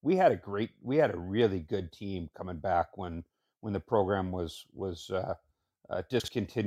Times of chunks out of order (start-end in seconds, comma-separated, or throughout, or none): 6.20-6.28